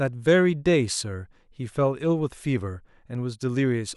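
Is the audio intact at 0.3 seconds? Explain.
Yes, the audio is intact at 0.3 seconds, with no audible fault at that moment.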